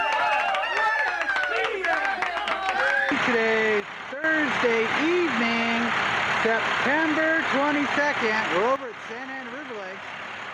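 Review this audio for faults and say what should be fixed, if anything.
A sudden gain jump, likely a gain setting applied from one sample to the next without a ramp, drops the sound and its background noise together by about 12 dB from 3.80 to 4.24 s, then by about 11 dB from 8.76 s to the end. Ramping every gain change over a few milliseconds would prevent these steps.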